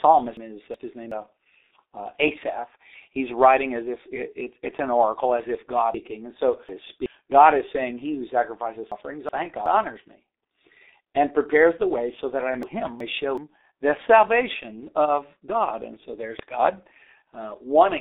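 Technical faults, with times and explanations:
throughout: G.723.1 codec. The sound is narrow and muffled, with nothing above about 3.8 kHz and a telephone-line band of roughly 300 Hz to 3.7 kHz. The damage is heavy: a hoarse texture and smeared consonants, which fits a bitrate near 6.3 kbit/s. At that rate the codec models the voice coarsely in 30 ms frames, so fast changes are averaged away and the fine spectral detail is lost.
0.37–1.12 s, 5.94–7.06 s, 8.92–9.66 s, 12.63–13.38 s: chunks out of order. Each time, a block of about 0.37 s plays after the block or blocks that should follow it: one block late at 0.37, 8.92 and 12.63 s, and two blocks late at 5.94 s, which makes that span longer. No audio is missing, but the sequence is scrambled, so the speech briefly sounds jumbled.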